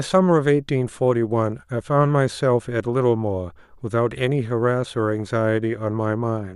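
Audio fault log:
No faults detected in the speech at any point.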